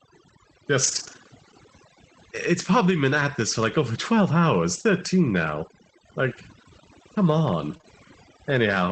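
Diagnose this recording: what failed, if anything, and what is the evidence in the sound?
Overdone noise removal, at the call-processing stage, runs through the whole clip. The suppressor is set too aggressively, so any frequency band near its noise estimate gets pulled down hard or gated off, and the quieter parts of the speech go with it. You can hear it in the pauses, which drop to near silence with little twinkling specks.

From 0.83 to 1.17 s there's a lost packet rebuilt from error correction, which is a network problem. Several separate packets went missing, but Opus in-band FEC meant each following packet carried a low-bitrate copy, so the decoder played those instead. That's about 180 ms of rebuilt audio with no gap, just rougher and noisier than its surroundings. The same thing happens briefly at 7.73 s, a single 20 ms frame.

Right after that comes short concealed packet loss, from 7.77 to 7.81 s and again from 7.81 to 7.85 s, back to back. 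Those 20 ms frames never arrived in time and had no redundant copy, so the decoder extrapolated the last sound to fill each hole and then crossfaded back. It's heard as a quick smear or wobble. All of this sits on a wideband call path topping out around 8 kHz, which fits Opus at roughly 24 kbps.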